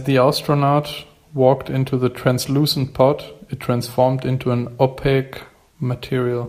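No technical faults are audible.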